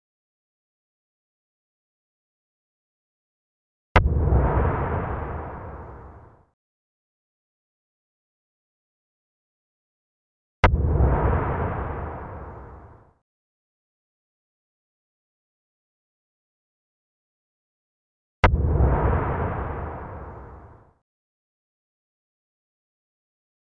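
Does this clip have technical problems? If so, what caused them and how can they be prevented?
No, there are no technical problems to address here.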